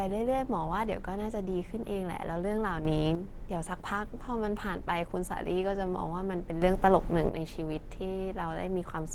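Throughout the speech, a low-rate encoder has most likely been at work: the grainy, hoarse, muffled texture matches Opus compression in its hybrid mode at a rate around 16 kbps. The codec damage is plainly audible, though content still reaches about 20.2 kHz.

From 2.85 to 3.15 s and again from 6.62 to 7.29 s, the digital gain was likely switched instantly rather than ramped. Each sudden gain jump lifts the speech and background noise together, by about 7 dB and then about 8 dB, dropping back abruptly at the end.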